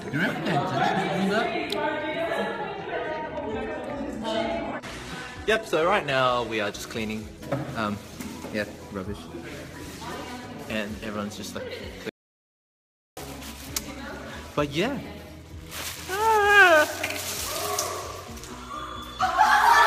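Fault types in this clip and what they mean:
Adaptive stream at a lower bitrate: from 2.71 to 6.71 s the stream switches abruptly to a much leaner encoding, which fits a drop from 96 kbit/s AAC-LC to 16 kbit/s HE-AAC. Nothing remains above about 12.3 kHz. Unlike a dropout, the sound never stops; only its quality changes, with no gap.
Audio dropout to silence: from 12.09 to 13.17 s the sound cuts off mid-flow for about 1.08 s. The gap is silent, with no room tone, most likely because the input was lost while recording continued. That sets it apart from a quiet passage or a bitrate dip, where some signal remains.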